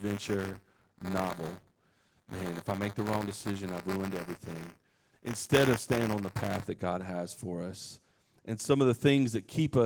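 Buffer tearing runs from 0.0 to 6.68 s. The program filling the ring buffer and the hardware draining it have slipped out of step, so they cross inside every period. A small slice of each period, roughly a fourteenth, replays audio from one lap earlier, about 20 ms old, with hard joins on both sides. This happens 200 times a second, which fits a period of about 5 ms, and it puts a steady robotic buzz over the speech. The Opus coding underneath is light and fullband.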